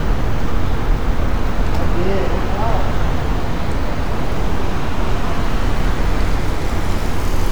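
No technical faults can be heard anywhere in the recording, and the signal holds steady and intact throughout.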